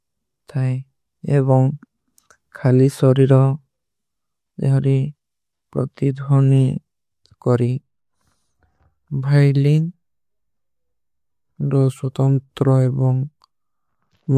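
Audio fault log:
No fault can be heard anywhere in the speech. Nothing in the audio calls for a line in this log.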